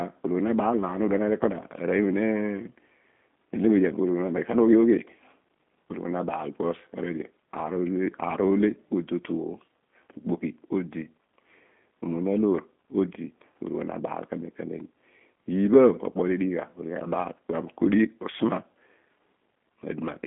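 From start to finish, the speech carries the sound of the G.729 codec. Nothing above about 3.7 kHz survives, and the low end thins out below roughly 200 Hz, giving a narrow telephone band. The codec rebuilds each short frame from a vocal tract model, a pitch predictor and a few pulses. That leaves the voice plainly rough, buzzy and slightly synthetic, with warbling on noisy sounds. The damage points to G.729A at 8 kbit/s.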